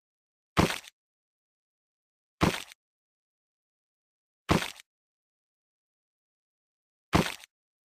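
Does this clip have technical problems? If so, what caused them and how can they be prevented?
Yes. A call bitrate drop runs from 0.78 to 2.23 s: the bandwidth estimate fell and the encoder was starved of bits, the sound suggesting a fall from about 40 kbps to roughly 14 kbps for about 1.4 s. Coarser coding makes the sound rough and muffled, with its high frequencies cut off, until the rate recovers. Preventing it means a steadier network path and a sensible minimum bitrate floor, so the encoder never has to drop that low.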